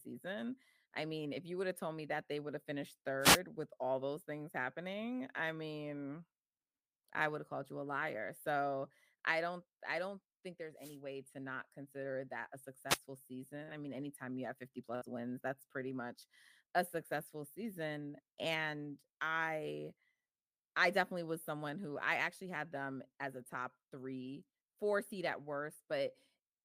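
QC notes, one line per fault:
3.20–3.40 s, 10.76–10.98 s and 12.88–12.99 s: wireless microphone noise hit. Three short swishes of static break over the speech, each lasting between about 0.1 and 0.2 s. The radio link from an analogue FM microphone faded when reflected signals cancelled the direct one. With the carrier weak, the receiver's own noise rose into the audio and partly covered the voice. Each hit then cleared as the signal recovered.
13.63–13.70 s: short concealed packet loss. About 40 ms of the call never reached the decoder in time. The receiver filled the hole by continuing the last sound for roughly 39 ms and then blended back into the real audio. The result is a brief smear or wobble rather than a silent gap. The filled stretch is an estimate, not the original sound, so any short consonant in that moment may be lost.
13.67–13.69 s: lost packet rebuilt from error correction. 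Inside that same disturbance, one 20 ms packet was recovered from a low-bitrate copy carried in the following packet, which is Opus in-band forward error correction. Because the decoder played this copy, that slice has no gap. It sounds rougher and noisier than the surrounding audio because the backup copy is coded at a much lower bitrate than the main stream.
14.95–15.04 s: burst of packet loss. About 60 ms of audio was lost or arrived too late to be played. The receiver extended the last sound for roughly 57 ms while turning it down, so it is heard as a short held buzz or fading hiss. The speech then resumes slightly further on, and the audio from the gap itself is missing.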